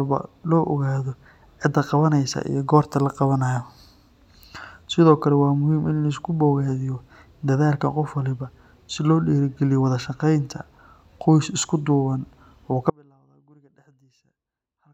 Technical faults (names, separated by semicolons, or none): audio dropout to a faint residue